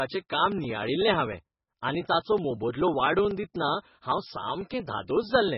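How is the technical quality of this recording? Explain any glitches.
The technical quality is poor, with heavy codec damage throughout the speech. This is likely MP3 compression: starved of bits, weak frequency lines flicker on and off and nothing survives above 5.6 kHz, giving a watery, swirly, dull sound consistent with about 16 kbps.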